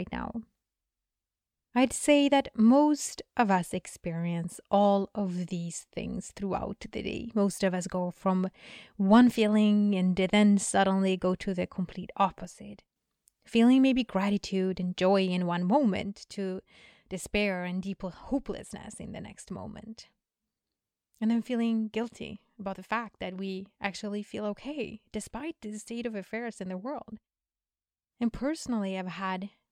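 At 12.45 s, after "go to the complete", the speech drops abruptly by about 6 dB for half a second, then again from 16.02 s, after "and joy in one", to the end. It is likely one channel dropping out. Unlike a fade or gain change, the drop is instant and exactly halves what both channels shared.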